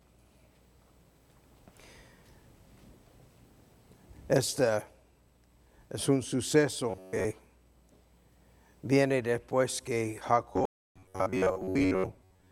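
Robotic sound from repeated short buffers occurs from 6.91 to 7.25 s and again from 10.53 s to the end of the clip. The sound becomes a rigid, metallic buzz locked at 93.8 Hz. The likely cause is audio arriving too slowly, so the software keeps replaying the last chunk while fresh material is skipped. That pitch points to a repeated slice of about 10.7 ms, and most of each stretch is made of these repeats.

A stream reconnect interrupts the second buzzing stretch from 10.65 to 10.98 s. The connection dropped, leaving 301 ms of silence. The player then reconnected and started a new decoder mid-stream, so the audio picks up at a point roughly 200 ms later than where it stopped, and some material is lost. After the gap the buffer-repeat buzz continues until the end.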